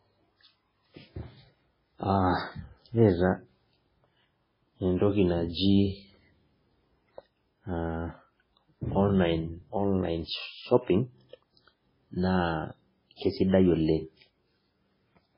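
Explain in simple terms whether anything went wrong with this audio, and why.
The whole recording sounds dull and watery. Nothing above about 5.3 kHz comes through, so the crisp top of the speech is gone, and fainter details seem to flicker in and out, giving a swirling, underwater quality. The likely cause is MP3 compression at a heavy setting. When the encoder has too few bits, it cuts off the treble at a fixed point and drops the quietest frequency details. Which details get dropped changes moment to moment, and that causes the flickering.

There is also pre-echo near the end. A brief hiss sits just ahead of a sharp sound from 13.16 to 13.21 s, about 50 ms long, and again from 13.48 to 13.52 s, about 41 ms. The codec works on short chunks of audio and spreads its noise evenly across each one. When a sudden loud sound lands late in a chunk, that noise leaks into the quiet moment just before it, and the attack itself sounds softened.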